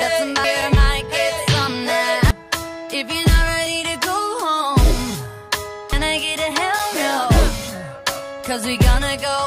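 At 0.44 s, 2.31 s and 5.93 s there is damaged data in the compressed stream. Corrupted bytes leave the decoder unable to read those frames, so it loses sync and hunts for the next valid frame header. Each event registers as a brief chirp, squawk, click or short hole.

At 6.79 s a block of digital silence lasting 5.8 ms interrupts the sound. Its length fits a 256-sample block of zeros, produced either by an output buffer left unfilled in time or by a calculation yielding invalid values. At this length it is heard as a tick or dip.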